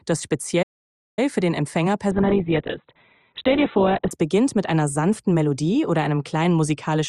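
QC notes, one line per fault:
0.62–1.19 s, playback stall: the sound cuts out mid-flow and the output sits silent for about 0.55 s before picking up again. It stops and then resumes, which is what you get when the player runs dry and simply outputs nothing until data arrives. The likely cause is a starved buffer or a blocked playback thread rather than anything in the source itself.
2.11–4.11 s, adaptive stream at a lower bitrate: for two seconds codec artefacts rise. The switch in and out is abrupt and gapless, as when an adaptive player drops to a cheaper rendition while the connection struggles and then climbs back. The sound fits a step down from Opus at around 64 kbit/s to something near 8 kbit/s.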